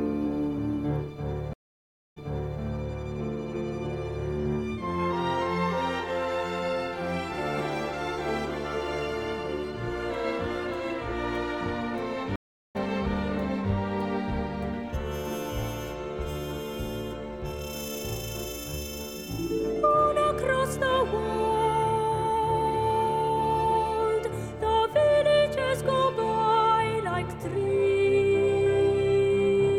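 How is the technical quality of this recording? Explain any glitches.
Two glitches, both stream reconnects, where the connection dropped and the player restarted its decoder mid-stream. At 1.53 to 2.60 s, about 0.63 s of silence, then audio resumes roughly 0.44 s earlier, repeating a bit. At 12.36 to 12.76 s, about 0.39 s of silence, then it jumps ahead about a fifth of a second.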